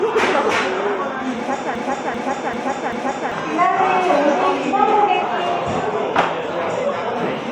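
From 1.75 to 3.32 s, a 0.39 s fragment repeats four times back to back: a broken-record loop, likely a stalled stream resending its last piece.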